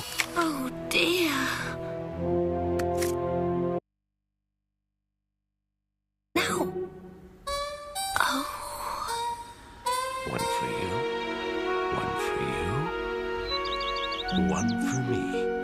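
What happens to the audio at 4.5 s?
The signal likely dropped while the path stayed live: an audio dropout to a faint residue, 3.79 to 6.35 s, cutting abruptly to hum about 55 dB down.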